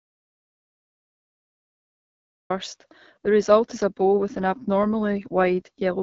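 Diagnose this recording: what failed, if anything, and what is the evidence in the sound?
Audio dropout to silence, capture stage: the clip opens in silence with no room tone until 2.5 s, likely a lost or muted input feed.

AMR wideband (HD Voice) codec at the codec stage: nothing above 7.1 kHz, and speech sounds rough and raspy, which fits AMR-WB running at its low 8.85 kbit/s mode.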